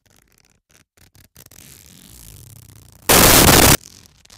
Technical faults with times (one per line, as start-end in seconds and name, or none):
3.09-3.75 samples built from the wrong bytes